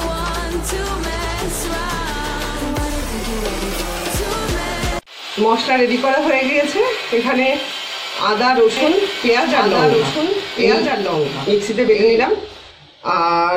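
A second copy of the signal was likely captured through a slower path, producing a doubled audio track from 8.77 to 12.71 s: a full-band repeat trails about one and a half seconds behind, roughly 5 dB quieter, dry, cutting in and out abruptly.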